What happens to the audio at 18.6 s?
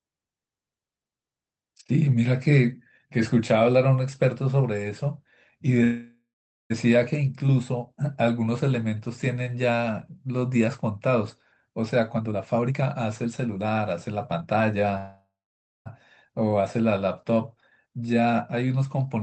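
At 18.6 s the speech is inside a jitter buffer speed-up running from 17.86 to 18.85 s. The receiver's buffer had built up more audio than its target, so it trimmed short pitch-period-sized slices again and again, cutting about a tenth of a second and playing the stretch roughly 11% fast. The pitch stays put but the talking sounds hurried. On a waveform some periodic cycles are missing while the rest keep their length; a spectrogram shows steady harmonics with syllables squeezed closer together, under the Opus path's 8 kHz ceiling.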